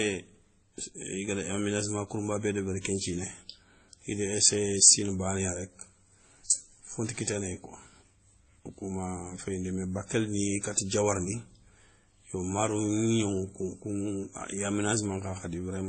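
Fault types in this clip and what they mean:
Transcoding between lossy codecs: the speech sounds dull and smeared, with stacked swirly artefacts and nothing above 8.4 kHz, likely from low-bitrate MP3 re-encoded as WMA.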